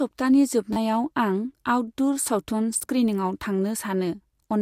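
A speech clip with a repeated buffer at 0.73 to 0.76 s: a 10 ms slice plays three extra times back to back, hard joins and all, so it comes across as a click or brief buzz rather than a stutter. New audio evidently arrived late, costing roughly 30 ms.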